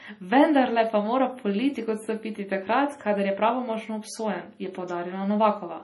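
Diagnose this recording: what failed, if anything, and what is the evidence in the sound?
The fault sits at the codec stage and runs the whole length of the speech. Nothing is heard above 11.5 kHz, a hard treble ceiling. The damage is heavy. The sound turns watery and swirly, s sounds chirp metallically, and attacks smear. The likely cause is MP3 compression at a starved bitrate, which fits about 32 kbps. Short of bits, the encoder cut the top band and zeroed weak frequency lines, which then flicker on and off between frames.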